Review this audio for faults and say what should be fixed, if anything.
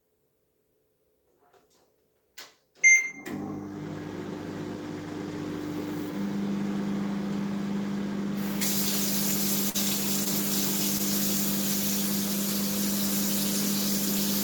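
At 9.69 to 9.76 s the sound briefly holds and smears with a slight buzz or dip, then carries on with nothing lost: a short stall from a late packet. The jitter buffer ran dry, and the receiver stretched the last sound by 49 ms until the packet arrived, pushing playback 49 ms later. A slightly deeper or adaptive jitter buffer would absorb this lateness.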